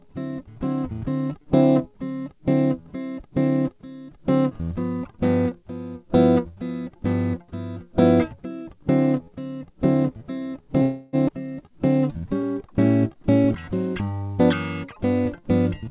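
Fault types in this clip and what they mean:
Call audio freeze, 10.82 to 11.16 s: the music stalls and the last sound is stretched into a fading fill for about 308 ms, then resumes exactly where it stopped. This likely comes from packets held up in transit, which drained the jitter buffer and left a gap rather than a loss.
Skip ahead, 11.28 to 11.31 s: playback jumps forward with only a few milliseconds of join, and roughly a fifth of a second of music is missing. The receiver dropped that stretch while later audio was already queued, stitching the two sides almost directly together.
Jitter buffer slow-down, 11.66 to 12.67 s and 14.02 to 14.21 s: the music drags at unchanged pitch, first at 95% speed adding 57 ms, then at 83% adding 40 ms. The receiver repeated tiny single-period slices to rebuild a depleted buffer reserve.
Jitter buffer speed-up, 14.20 to 14.41 s: right after the second slow-down the music rushes at 152% speed with pitch held, and the tempo lurches. 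Roughly 100 ms was trimmed away in small period-length cuts to shed surplus buffered delay.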